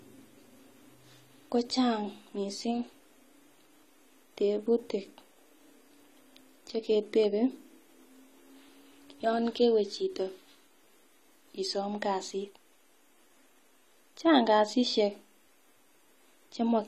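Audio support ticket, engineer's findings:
Speech dull and smeared for the whole clip, with no content above 14 kHz. Likely cause: AAC compression (AAC-LC) at a low bitrate, consistent with about 32 kbps. The encoder dropped the top band and coarsely quantised the remaining spectrum.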